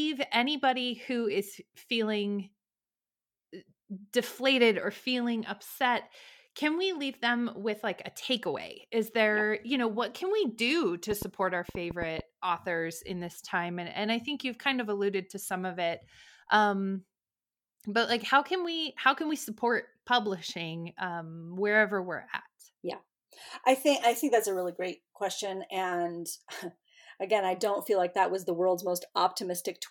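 It's a speech recording with a train of clicks running from about 11.11 s to 12.20 s, just before "authors in this time". There are roughly seven sharp, similar-shaped pops at an uneven pace of about 5.6 per second, poking out roughly 10 dB above the speech. The cause is likely electrical interference from nearby gear or a faulty connection or power supply.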